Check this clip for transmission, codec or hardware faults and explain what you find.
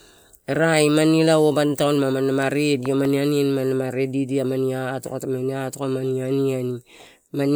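One hardware fault is present. From 2.86 to 3.07 s, a loud pop lands twice, roughly 10 dB above the speech. A voltage pulse, likely from a plug, switch or static, caused it. The speech continues underneath.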